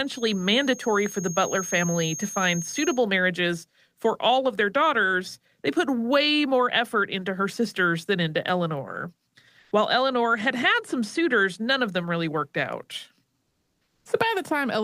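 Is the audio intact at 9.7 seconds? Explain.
No. From 9.59 to 9.71 s the background turns into a steady, featureless hiss at the same level: comfort noise in place of the background, likely from discontinuous transmission.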